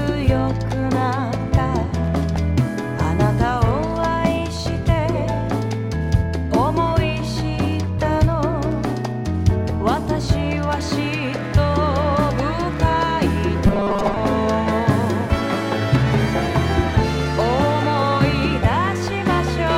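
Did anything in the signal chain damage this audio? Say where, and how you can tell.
Yes. Robotic sound from repeated short buffers, likely a driver or buffer underrun, hits 13.67 to 14.17 s: looping 5 ms blocks replace most of the audio with a rigid 200 Hz buzz.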